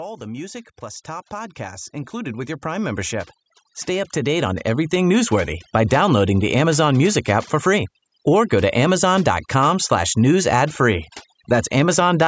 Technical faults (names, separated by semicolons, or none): overdone noise removal; automatic gain rising